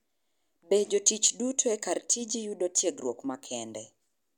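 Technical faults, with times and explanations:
0.13–4.32 s, clock slip clicks: a faint, evenly spaced ticking runs under the speech, about ten ticks per second, forming a light rattle that is clearest on louder, sustained speech and absent in the pauses. Each tick is one sample dropped or repeated. The likely cause is two unsynchronised device clocks drifting apart by roughly 200 ppm, so the offset grows by a whole sample about every tenth of a second.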